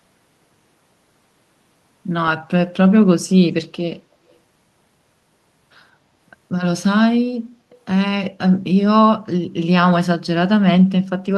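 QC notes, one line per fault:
4.31–4.36 s, echo leak: a very faint scrap of the speech returns 185 ms late, likely from a far-end loudspeaker whose echo canceller let residue through. Unlike room reverb, it is a discrete delayed copy rather than a smooth decaying tail.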